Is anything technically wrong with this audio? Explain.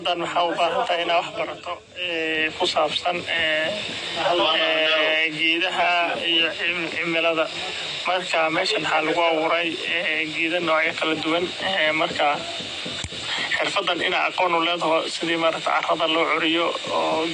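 Yes, the whole clip carries plainly audible AAC compression damage, likely from a low-bitrate AAC-LC encode, around 32 kbps. Nothing survives above 9.6 kHz, so the speech sounds dull, and the starved quantisation leaves sibilants fizzy and sustained sounds warbly and smeared.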